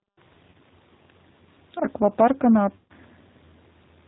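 It's a short speech clip, and the whole thing has the sound of the G.729 codec. The top end stops at 4 kHz, and there's a slightly rough, synthetic edge because the decoder rebuilds each frame from a vocal tract filter, a pitch predictor and a handful of pulses rather than the actual waveform. The damage is plainly audible, which fits an 8 kbit/s G.729A stream. On top of that there are two spots of VoIP packet loss concealed by the speech codec. The first runs from about 0.50 to 0.55 s, a 40 ms gap that points to roughly four lost 10 ms frames. The second runs from 2.75 to 2.92 s, a 150 ms gap. In each one the decoder keeps stretching its last pitch and filter with the gain dropping, so the sound turns into a fading buzzy tone or coloured noise. Because each frame builds on the previous one, the sound stays weak or smeared briefly after packets return.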